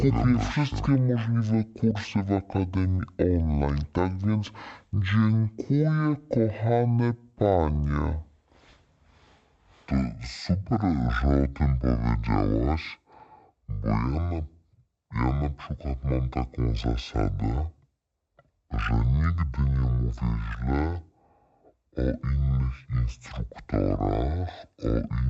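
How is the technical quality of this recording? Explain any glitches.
The recording has one serious fault running through the whole clip. Stereo read as mono: interleaved left and right samples run end to end as one channel, halving speed and dropping pitch 12 semitones. Unlike a plain sample-rate mismatch, a fainter mirrored copy sits in the upper spectrum.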